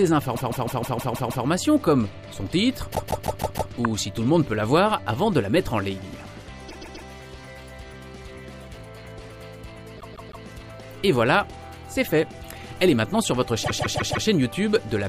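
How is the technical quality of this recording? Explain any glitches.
The recording has a recurring stutter from repeated frames. It occurs five times: 0.35–1.45 s, 2.91–3.70 s, 6.68–7.07 s, 9.97–10.44 s and 13.62–14.25 s. Each time, a short block of compressed audio plays over and over. The block is about 157 ms long, or 131 ms at 6.68 s. It repeats three to seven extra times. Each run stretches the timeline by 0.4 to 1.1 s.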